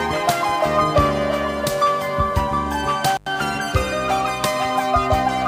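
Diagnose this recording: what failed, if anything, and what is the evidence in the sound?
Analogue wiring is the culprit: an intermittent contact. At 3.15 s the sound drops out for about 94 ms, with crackle at both edges and faint hiss underneath until it returns by 3.28 s. That's a loose plug or cable briefly opening the signal path.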